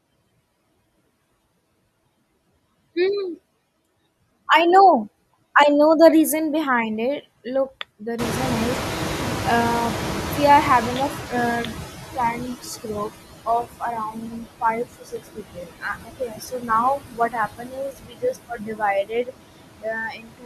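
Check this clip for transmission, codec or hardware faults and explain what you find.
The faults here all come from the noise suppressor, not the codec or hardware path, and three kinds stand out.

Noise suppressor artifacts run through the whole speech clip. The suppressor pulls down whatever bands it judges to be steady noise, frame by frame, by about 18 dB here. So the background dips in the gaps and comes back up under the talker.

The noise suppressor catching up shows from 8.18 to 12.54 s. Around 8 s the room noise jumps by about 22 dB, ending up only about 9 dB under the speech. That noise is real and not a fault, but the suppressor's noise estimate trails it. For roughly 4.4 s the noise comes through less reduced, then settles down as the estimate adapts, with the cut landing around 16 dB.

Speech cut by the noise suppressor sets in near the end of that adaptation. The suppressor starts mistaking parts of it for noise at 12.35–12.66, 12.83–13.12, 13.46–16.7, 16.97–18.82, 19.03–19.32 and 19.59–20.45 s. 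The drops reach about 10 dB at first and deepen to about 22 dB by the end. The short ones clip about a tenth to a fifth of a second. The longer stretches lose from about 0.7 s to 1.5 s each, leaving consonants and word endings swallowed or faint.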